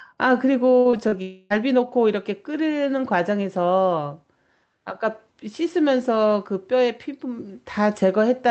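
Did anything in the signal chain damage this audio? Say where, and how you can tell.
Yes, at the network stage. From 0.79 to 1.14 s, repeated packet loss (robotic sound) occurs: five short gaps, the longest 56 ms, each patched by extending the previous sound. With about a third of that span concealed, the audio turns choppy.

From 1.22 to 1.52 s, about 0.3 s of sound is replaced by a smeared continuation of what came before, with nothing falling to silence, and the original audio from that stretch never returns. This is likely a long network dropout, with the receiver's concealment filling the hole.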